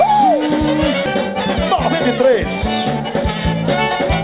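Sound comes through a narrowband call path, with nothing above 4 kHz, which points to G.711 A-law at 64 kbps. At about 1.06 to 1.08 s there's a skip ahead. Playback jumps forward with no fill, and something like 0.7 s of audio simply isn't there. The two sides are butted together almost directly, so you hear an abrupt splice rather than a dropout. That's what you get when a chunk is lost in transit or thrown away by an overflowing jitter buffer while later audio is already queued. From about 3.0 to 3.35 s there's a jitter buffer speed-up. The receiver was holding more audio than it wanted, so it snipped out short pitch-period-sized pieces over and over, a few tens of milliseconds in total. That stretch plays about 9% fast at unchanged pitch and comes across as rushed.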